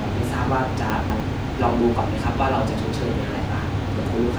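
From 0.9 to 1.2 s, chunks out of order: a 100 ms chunk played two chunks late, briefly jumbling the speech, with three hard joins.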